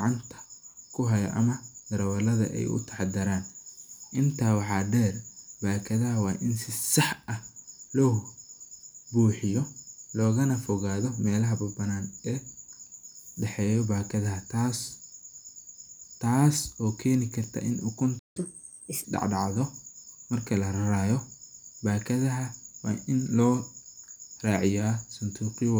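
At 18.18 s the speech cuts out abruptly mid-flow and stays silent for 168 ms, until 18.37 s. This is a playback stall: the player most likely ran dry of buffered audio or had its output thread blocked, so nothing reached the output until it recovered.

From 18.37 s to 19.04 s the speech comes back hurried and audibly raised, playing at 1.25 times normal speed with pitch lifted by about four semitones before settling. This is catch-up at higher speed: the player resamples its backlog faster to recover the time lost in the stall.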